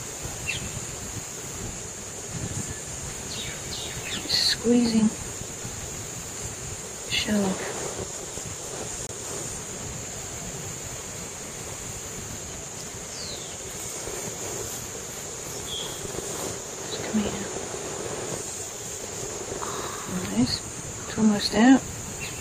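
At 9.07 s the sound drops abruptly to silence until 9.11 s: a corrupt frame muted. Damaged compressed data was rejected, and the 42 ms gap fits two frames.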